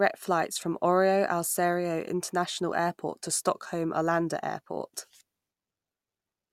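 Nothing technically wrong turns up anywhere in this bit of speech, so there are no times or causes to point to.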